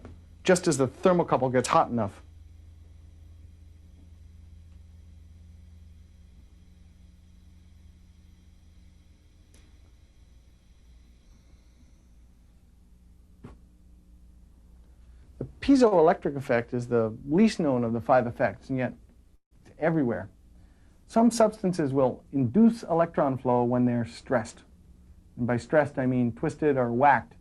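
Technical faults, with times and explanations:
15.87–15.94 s, short stall from a late packet: the sound at this point is briefly held, stretched for about 42 ms before it picks up exactly where it left off. Nothing is skipped. A packet arrived after its playout time and the jitter buffer ran dry, so the receiver extended the last stretch of audio until the packet arrived. The whole stream now plays 42 ms later than before.
17.91–18.79 s, jitter buffer speed-up: across this stretch the audio runs about 5% fast while its pitch stays the same, giving a slightly hurried feel. Short pitch-period-sized slices were cut out repeatedly, roughly 50 ms in total. The receiver was holding more buffered audio than it wanted, and trimmed the backlog this way.
19.36–19.53 s, call audio freeze: the audio stops moving for 155 ms. The last sound carries on briefly and then falls away, leaving about 90 ms of silence before playback resumes from the same point, with nothing lost. 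This is likely packets held up in transit that emptied the jitter buffer, so the receiver had to improvise a fill. The gap pushes playback a further 155 ms behind.
21.65–23.01 s, jitter buffer speed-up: a second, longer hurried passage plays about 6% fast at unchanged pitch. Roughly 100 ms of small periodic pieces are dropped to claw back excess buffered delay.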